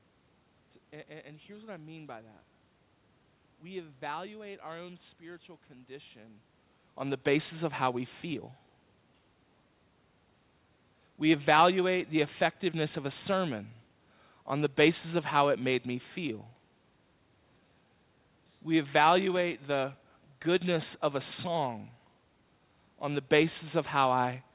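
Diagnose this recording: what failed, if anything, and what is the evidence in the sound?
Nothing failed in this recording; the sound gives no evidence of any fault.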